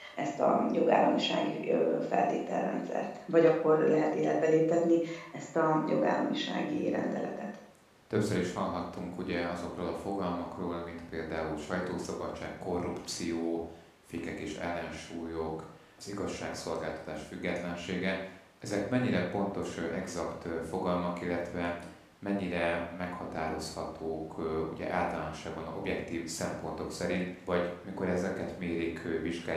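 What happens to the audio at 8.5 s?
Nothing goes wrong at 8.5 s; the speech carries on intact through that moment, with no dropout, glitch or other fault to be heard.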